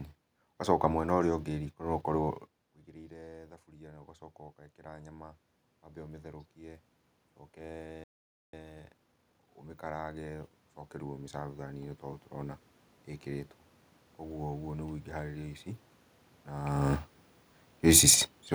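Automatic gain rising affects this speech clip from 4.76 to 6.91 s. After the input level falls by about 19 dB, the gain control slowly adds about 4 dB, so the voice and the room noise swell together over roughly two seconds. A playback stall follows at 8.04 s: the sound cuts out mid-flow for about 0.49 s, most likely because the player ran short of data or its thread was briefly blocked. Time-compressed catch-up runs from 8.53 to 9.51 s, as the player works off its backlog by trimming and cross-fading short fragments. The speech plays about 1.5 times faster at unchanged pitch. A second stretch of automatic gain rising, from 9.81 to 12.68 s, lifts the level by about 6 dB over nearly three seconds, and the background noise climbs with the voice.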